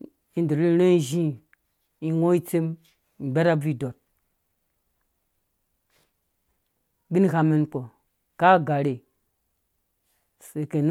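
Speech, with nothing technically wrong with it.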